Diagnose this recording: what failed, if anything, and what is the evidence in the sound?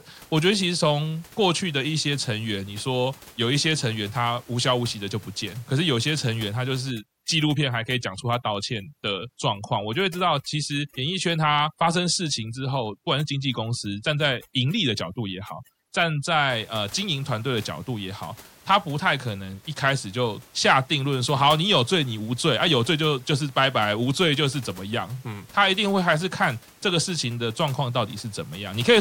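Overdone noise removal in call processing, 6.91 to 16.50 s: bands near the noise estimate are gated off, leaving twinkling isolated spectrogram specks.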